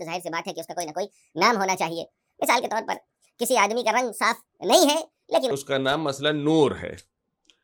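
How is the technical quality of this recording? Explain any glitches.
The recording has one clear glitch. From 0.0 to 5.51 s there is a section at the wrong speed, playing 1.54 times too fast. Pitch and tempo rise together by about seven semitones. The sound turns high and hurried. The likely cause is playback against the wrong clock.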